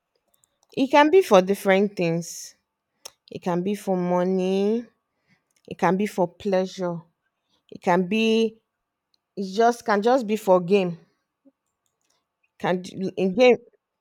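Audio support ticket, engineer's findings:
No audible faults found on this speech recording.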